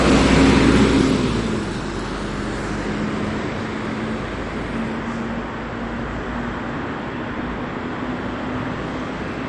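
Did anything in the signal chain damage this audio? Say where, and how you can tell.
Yes, MP2 compression damage runs throughout the clip, from start to finish, at the codec stage. The audio sounds dull, with nothing above 11.3 kHz, and has a gurgling, granular roughness. This is likely MPEG Layer II coding starved of bits, consistent with a rate near 48 kbps. The codec divides the spectrum into 32 sub-bands, switches off the upper ones and coarsely quantises the rest, so bands flicker in and out.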